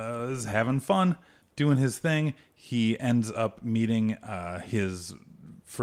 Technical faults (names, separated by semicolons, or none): none